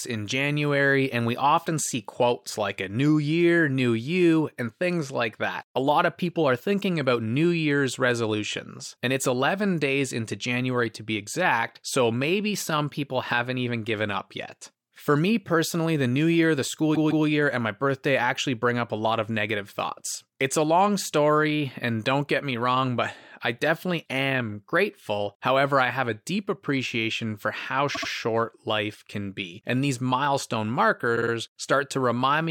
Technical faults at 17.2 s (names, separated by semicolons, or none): repeated frames